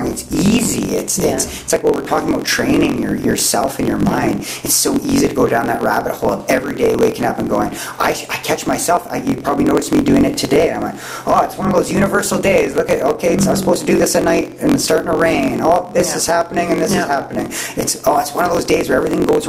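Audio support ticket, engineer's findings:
Block size mismatch (truncated), whole clip: steady 45.9 Hz buzz, runs 1.07x fast at normal pitch (unlike a sample-rate error). Block tails dropped, which fits 1024-sample blocks.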